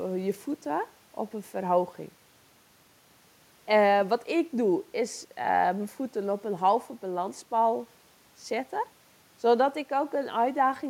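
Listening closely to the speech, nothing stood out as a technical fault at any point.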